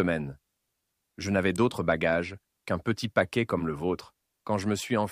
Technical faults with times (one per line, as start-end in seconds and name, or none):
1.56 electrical switching spike